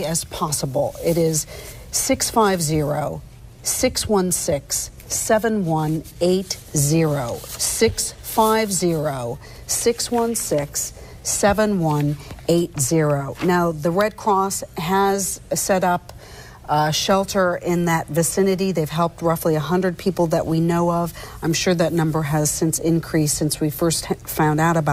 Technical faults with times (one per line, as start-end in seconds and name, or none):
0.00-24.92 clock drift between sender and receiver
0.06-24.85 repeated timing corrections